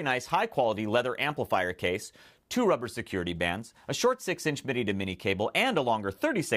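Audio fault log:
No faults heard in the audio.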